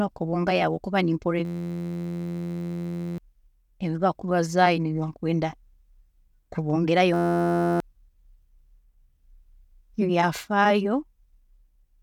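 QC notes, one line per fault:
1.45–3.18 s and 7.14–7.80 s, system hang loop: playback stalls while the output keeps recirculating one 11.61 ms slice, heard as a steady 86.1 Hz buzz. This fits a 512-sample buffer. About one and a half seconds, then under a second, of audio is lost.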